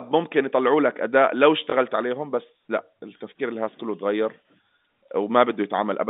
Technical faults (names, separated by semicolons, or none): packet loss with last packet repeated